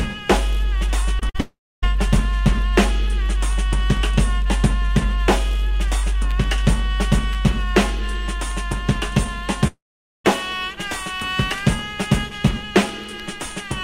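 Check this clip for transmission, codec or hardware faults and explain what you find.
Two kinds of transmission fault are present, both network losses; nothing points to a codec or hardware problem.

From 1.19 to 1.87 s there is repeated packet loss (robotic sound). Data went missing four separate times, in gaps of up to 50 ms, about 100 ms in total. Each time the receiver covered the hole by extending the preceding sound, so roughly a seventh of that stretch is patched audio. The result is a choppy stutter with small pieces missing.

The clip also has two stretches that sound like a long network dropout, the likely cause being that no audio reached the receiver for several hundred milliseconds. The first, from 1.41 to 1.84 s, sits inside the choppy passage. About 420 ms is lost there, and after a brief fading carry-over, roughly 270 ms is silence. The second runs from 9.67 to 10.26 s and loses about 580 ms. 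A short fading continuation gives way to around 460 ms of silence before the sound resumes, with that portion simply gone.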